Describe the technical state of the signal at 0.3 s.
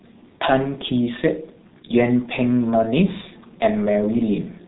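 G.723.1 codec damage is present at 0.3 s, as it is across the entire clip. The speech has been squeezed through a low-rate telephony coder that works in 30 ms frames and rebuilds the voice from a slowly updated model. The sound fits a rate near 6.3 kbit/s. Nothing survives above 3.9 kHz, so the speech is muffled and hoarse, and the heavy coding smears consonants into one another.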